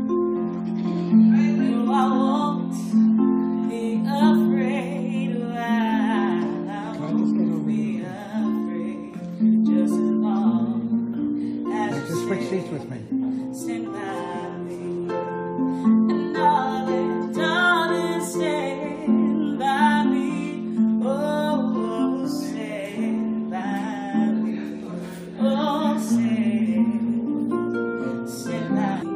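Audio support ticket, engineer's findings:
Damaged data in a compressed stream. Brief glitches at 23.60 s and 29.01 s, each under 20 ms. Probable component: decoder input. Corrupted bytes make frames misread. Decoder loses sync and resyncs on the next frame header.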